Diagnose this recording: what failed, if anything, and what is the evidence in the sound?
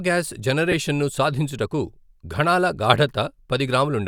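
The fault sits at the codec and wireless link stage: lost LE Audio frames. At 0.72 s, just before "ను సాధించుటకు", there's a brief rough smear where the speech loses its clean tonal texture for about 10 ms, which points to one dropped Bluetooth LE Audio frame. The LC3 decoder covered the gap by replaying the previous frame's spectrum with randomised signs, so the harmonics turn noisy for that instant. The gap was too short for any audible fade toward silence.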